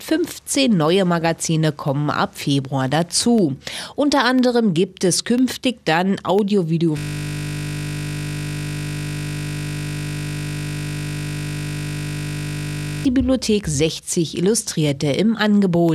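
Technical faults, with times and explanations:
0.38–15.89 s, periodic USB or driver dropouts: A background task stalls the USB bus or audio driver every 0.5 s, and each stall loses a sliver of audio, roughly a tenth of a millisecond, which is replaced by silence. Around 30 of these gaps fall at an even spacing across the clip. Each tiny hole breaks the waveform abruptly, so it is heard as a regular tick twice per second wherever sound is present.
6.98–13.05 s, system hang loop: The computer or driver freezes while the sound hardware keeps replaying the same ring buffer, so a single 20 ms stretch of audio repeats exactly, back to back, for about six seconds. Because the loop restarts 50 times a second, the repetition fuses into a steady 50 Hz buzz that replaces the normal sound, with no change in content until playback recovers at 13.05 s.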